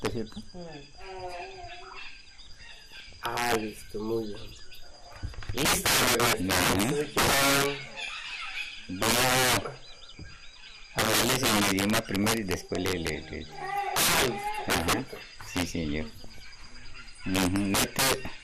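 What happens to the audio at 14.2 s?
Around 14.2 s you're in the middle of a burst of DAB burbling running from 14.07 to 14.25 s. Bit errors slipped past error correction into the MP2 data, so single sub-bands jump in level frame by frame, which is heard as burbling in the sound. The span fits a handful of corrupted frames.

Under that, the whole clip carries integer overflow. Peaks driven about 18 dB too hot wrap past the largest integer and flip to the opposite sign instead of being limited. On the small share of loud samples that go over, you get violent cracks, far harsher than clipping.

The sound also has a dull, gurgling, granular texture throughout, with upper bands flickering in and out. That's likely MP2 compression at a starved rate, something like 80 kbps, where too few bits force whole sub-bands off and coarsely quantise the rest.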